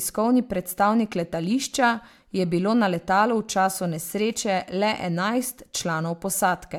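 No technical faults can be heard in the recording. The speech runs for about 6.8 seconds without any technical interruption.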